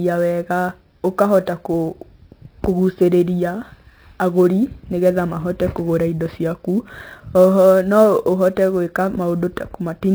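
MP3 compression throughout: nothing survives above 5.8 kHz, and the speech turns watery and swirly, likely from an encoder short of bits, fitting roughly 24 kbps.

Sample clock jitter throughout: an unsteady converter clock mistimes samples by around ten microseconds, adding roughness about 30 dB below the speech that swells on loud, bright sounds.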